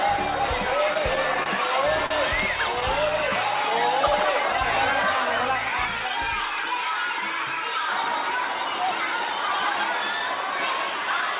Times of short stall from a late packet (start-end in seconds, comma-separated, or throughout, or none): 2.06-2.12